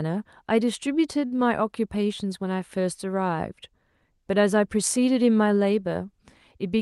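A short stall from a late packet at 1.25 to 1.33 s: the jitter buffer ran dry, so the sound is stretched by about 53 ms before resuming, leaving the call that much further behind. Short concealed packet loss follows at 1.37 to 1.40 s, where 20 ms of speech never arrived and the decoder bridged the gap with continued sound, heard as a brief smear.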